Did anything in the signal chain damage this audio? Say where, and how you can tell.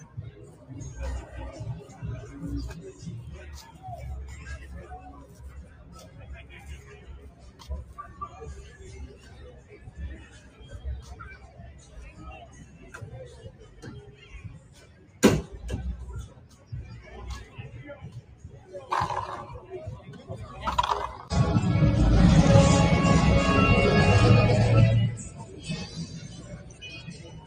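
Yes. Call processing did the damage: a noise suppressor built for speech was applied to this sound throughout. Sustained and fading material swings in level by around 20 dB, so it pumps and thins. On a spectrogram, onsets stay bright while held energy and tails dim unevenly.

Sound cut by the noise suppressor appears at 0.06–0.68 s, 5.19–7.65 s, 9.1–10.6 s, 11.41–12.82 s, 13.5–15.22 s, 16.34–16.72 s, 18.18–18.68 s, and from 25.19 s to the end. Each is a drop of about 6–7 dB. The waveform shows the envelope sagging or decays chopped short after each attack.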